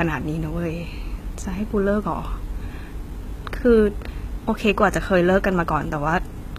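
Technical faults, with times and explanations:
Throughout, HE-AAC compression: the speech carries plainly audible codec damage, and nothing reaches above 14.9 kHz. The likely cause is HE-AAC v2 at a very low bitrate, consistent with about 20 kbps. Only the lower spectrum is coded directly. The treble is rebuilt by copying lower bands upward under a coarse envelope, so the top end sounds present but synthetic, with harmonics that fail to line up across the crossover.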